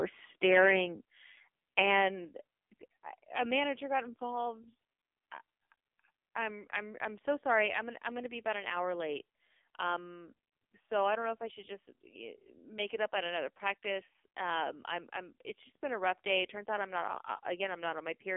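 Speech runs through the whole clip in the AMR narrowband mobile codec. It is confined to a telephone band of roughly 300 Hz to 3.5 kHz, and nothing at all reaches above 3.6 kHz. The damage is heavy: the voice sounds buzzy and synthetic, the way a very low bitrate mode near 6 kbps would leave it. Simple low-pass filtering would only dull the sound, whereas this codec rebuilds the voice from a coarse vocal-tract model with sparse pulses, so the buzz and artificial timbre set it apart. Two sudden level drops stand out, about 5 dB at 1.02 s and about 4 dB at 2.25 s. Voice and background fall together, in a single step, and the level then stays down. The likely cause is the microphone volume stepped down by call software reacting to an over-loud input. A compressor or automatic gain control would ride the level up and down smoothly and recover, but these drops are instantaneous and permanent.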